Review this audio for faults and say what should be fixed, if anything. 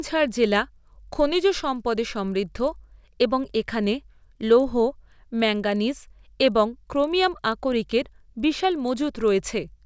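A resampler restarted on every block affects the whole speech clip. Each 40 ms block went from 24 kHz to 16 kHz in isolation, so every edge is computed without its real neighbours, producing a 25 Hz ticking buzz. Unlike mains hum, it disappears during pauses. Keep the resampler's filter state running across blocks.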